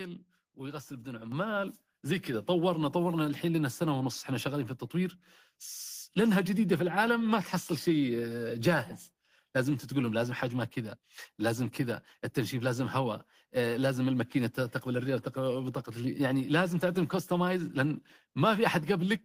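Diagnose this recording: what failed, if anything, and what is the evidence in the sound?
Call processing stepped up the microphone volume twice, at 1.32 s (about 7 dB) and 2.34 s (about 3 dB), lifting speech and background together abruptly.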